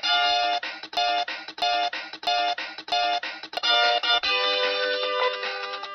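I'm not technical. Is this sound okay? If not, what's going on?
No. From 0.97 to 3.57 s there is a broken-record loop: the same 0.65-second piece plays four times back to back, each copy identical and equally loud, unlike an echo, which fades. The audio meant for that stretch is missing, likely because playback or streaming stalled.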